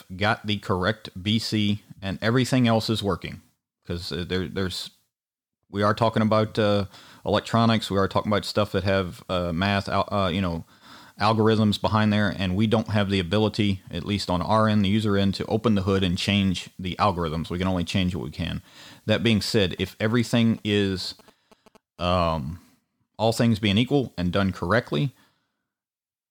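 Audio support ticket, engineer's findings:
GSM signalling bursts, 19.16–22.24 s. Nearby 2G handset signalling; its RF bursts rectified in the audio path. Heard as galloping dit-dit-dit groups of short 217 Hz buzzes, some 25 dB below the speech. Probable entry point: an input stage or cabling.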